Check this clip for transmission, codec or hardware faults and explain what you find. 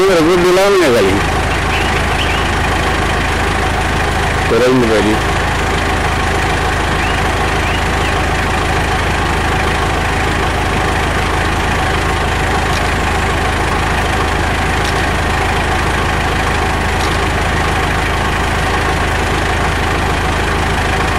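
A harsh, buzzing fuzz rides on every loud moment for the whole clip: hard clipping. The signal is driven about 24 dB beyond what the stage can pass, so roughly one sample in seven is flattened at the ceiling, and those squared-off peaks spray harmonics high up the spectrum.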